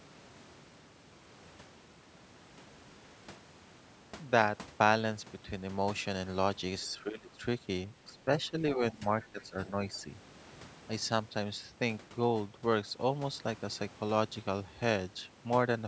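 From about 6.81 to 6.88 s there's a faint scrap of a second voice, the other side's voice leaking through, sitting roughly 30 dB under the speech. It's most likely loudspeaker echo the canceller didn't fully strip out. It comes back briefly at 8.07 to 8.12 s and 9.41 to 9.45 s, even fainter the first time.

Right after that first leak, the main speech is suppressed in double talk, dipping by up to around 15 dB from 6.9 to 7.44 s. The canceller likely couldn't tell the talker from the echo and pulled both down. Shorter dips of about 10 to 15 dB follow at 8.13 to 8.28, 8.5 to 8.57, 8.74 to 9.03 and 9.32 to 9.78 s, so the voice sounds choppy and ducked through that stretch.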